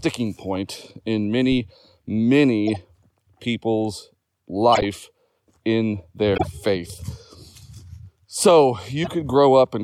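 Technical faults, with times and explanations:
0.55 s, 2.68 to 2.76 s, 4.73 to 4.83 s, 6.34 to 6.47 s and 9.03 to 9.08 s, corrupt frame decoded: each is a short chirp or burst of noise laid over the speech. Damaged compressed frames were played anyway, so misread gains and codes put energy at the wrong frequencies for a few frames at a time. The burst near 4.7 s is loudest, peaking around -5 dBFS. Unlike a thump, these stop abruptly at a frame boundary.
1.52 to 1.62 s, phantom power thump: a deep low-frequency thump as a supply switched on or off on a live input and the voltage step passed through the coupling capacitors. It dies away in about 22 ms. It is distinguished from the decoder bursts by its low pitch and the smooth decay of a charging capacitor, not a sudden stop.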